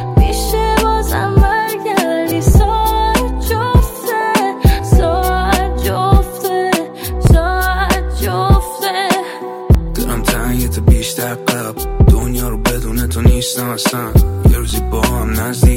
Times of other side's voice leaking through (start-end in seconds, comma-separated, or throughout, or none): none